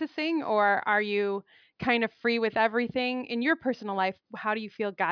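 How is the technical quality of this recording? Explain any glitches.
The technical quality of this recording is sound, with no glitches to explain.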